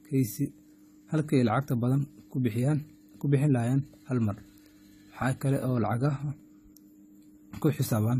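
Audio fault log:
Throughout, AAC compression: the speech sounds plainly dull and smeared, with a fizzy, warbling texture on sibilants and held sounds and nothing above 14 kHz. The likely cause is AAC-LC coding at a low rate, fitting roughly 32 kbps, where coarse quantisation trims and blurs the upper spectrum.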